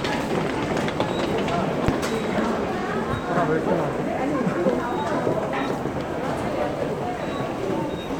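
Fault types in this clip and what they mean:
No faults can be heard.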